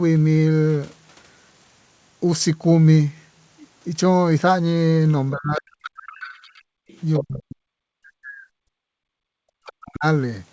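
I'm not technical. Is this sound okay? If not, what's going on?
No. Three problems come from the call's echo canceller, the part that removes your own loudspeaker from your microphone.

Speech suppressed in double talk: from 5.32 to 6.24 s, 7.2 to 8.49 s and 9.1 to 10.05 s, the voice sinks almost to silence in places, likely because both sides spoke at once and the canceller turned everything down. Unlike a network dropout, it happens only while the other person is talking.

The other side's voice leaking through: from 5.59 to 7.24 s a faint second voice sits underneath, and it briefly returns around 9.7 s, even quieter. The likely cause is that the canceller missed part of the loudspeaker sound. This is an added voice, not a missing one.

Background gated by the echo canceller: from 6.52 to 6.87 s, and very briefly at 8.77 to 8.82 s, the room sound itself drops to near silence and then returns. 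These dips happen in the gaps, not while speech is being cut, which sets them apart from the double-talk problem.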